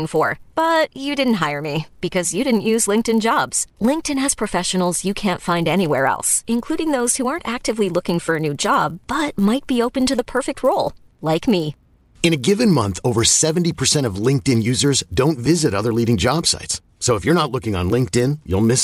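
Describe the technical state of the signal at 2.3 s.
At 2.3 s the speech carries a resampler restarted on every block, present throughout the clip. Each 10 ms block is converted alone, leaving a small error at every edge, heard as a 100 Hz buzz. Unlike mains hum, it sounds only while speech is present.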